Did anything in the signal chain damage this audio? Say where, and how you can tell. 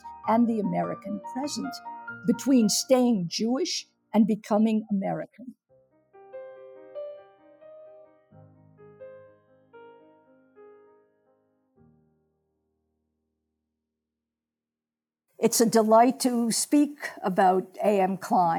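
Yes, in call processing. The noise suppressor cut sound at 8.07–8.8, 9.32–9.74, 10.07–10.58 and 11.78–12.06 s. It judged that sound to be noise and pulled it down by about 9 to 12 dB.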